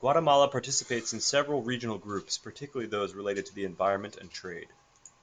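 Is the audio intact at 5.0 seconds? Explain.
Yes, at 5.0 seconds the speech is intact, with no dropout, click, distortion or other fault at that moment.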